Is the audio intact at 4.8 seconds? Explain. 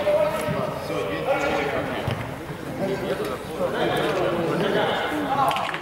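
Yes, at 4.8 seconds the audio plays through cleanly, with no dropout, click, distortion or other fault.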